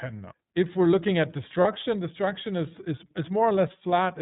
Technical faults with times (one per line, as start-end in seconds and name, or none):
0.00-4.21 iLBC codec
1.61-1.66 lost iLBC frames